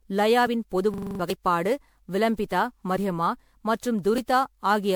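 The whole clip has that swirly, hollow, smeared quality with soft attacks, well beyond what a single 128 kbit/s MP3 would give you. It's likely generation loss: something like fifteen decode-and-re-encode passes, each requantising on a shifted frame grid so the damage stacks. Nothing survives above 20.8 kHz.

From 0.94 to 1.20 s there's a system hang loop. The machine froze while the hardware kept cycling the same ring buffer, so a 42.67 ms slice repeats six times at 23.4 Hz, which fits a 2048-sample buffer. You hear a rough buzzy stutter, and about a third of a second of real audio never arrives.

At 1.30 s and again at 4.18 s there's a sudden jump in the sound. That's likely a dropped buffer from an overrun, where the samples were overwritten before being read and the two sides got spliced together. Roughly 40 ms is missing at the first spot and about 20 ms at the second.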